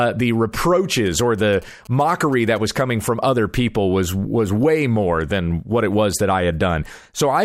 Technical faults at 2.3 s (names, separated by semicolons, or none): GSM signalling bursts